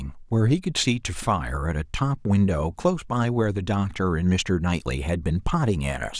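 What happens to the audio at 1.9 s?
Nothing goes wrong at 1.9 s; the speech carries on intact through that moment with no dropout, click, distortion or other fault.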